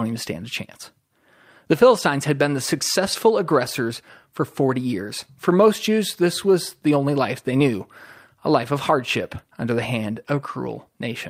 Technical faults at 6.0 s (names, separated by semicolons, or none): clock drift between sender and receiver; repeated timing corrections